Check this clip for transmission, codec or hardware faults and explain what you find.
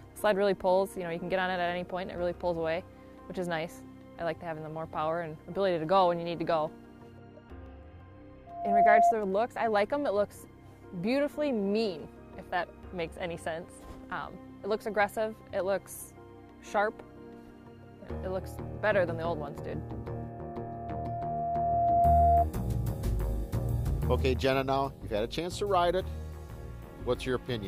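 There is loudspeaker feedback squeal, twice: 8.46 to 9.14 s and 20.15 to 22.45 s. A microphone-loudspeaker loop runs away at 691 Hz, swelling over a fraction of a second, then about two seconds, to roughly 10 dB above the sound.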